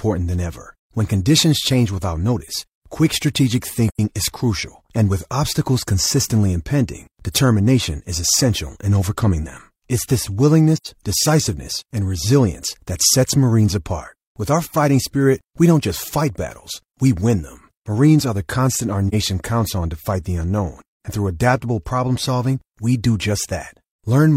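Three soft dropouts: at 3.90 s after "without notice quick strategic", at 10.76 s before "decisiveness and resilience that", and at 19.08 s after "constant our". This is AAC frame loss with muting: the decoder zeroed missing frames, so the overlapping windows fade the sound out and back in. The first two gaps run about 85 ms, roughly two frames, and the last about 43 ms. The first two are soft-edged holes and the last is a brief dip.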